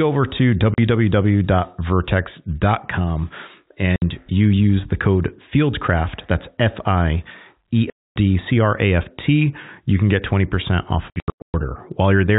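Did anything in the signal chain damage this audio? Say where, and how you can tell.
Yes. Packet loss filled with silence, at the network stage, cuts holes in the speech at 0.74 to 0.78 s, just after "over to", at 3.96 to 4.02 s, just before "you use the code", at 7.90 to 8.16 s, and across 11.10 to 11.54 s. That last stretch loses 360 ms in scattered gaps, the longest 120 ms. The gaps come in steps that fit 20 ms packets, and each one drops to dead silence with hard edges because nothing fills the missing audio. The G.711 telephone band itself is intact.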